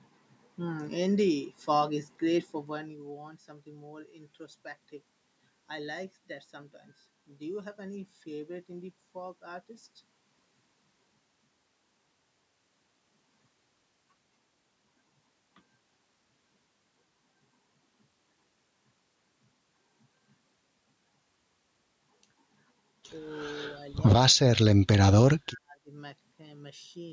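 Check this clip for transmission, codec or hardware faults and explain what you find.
One fault turns up, late in the speech: speech suppressed in double talk, at 23.74 to 24.04 s, 24.34 to 24.61 s and 25.34 to 25.92 s. The voice sinks in patches, less deeply in the first (about 10 dB), then almost vanishing in the second and third (around 40 and 30 dB). The likely cause is an echo canceller that, hearing both sides at once, mistook this talker for loudspeaker echo and turned everything down.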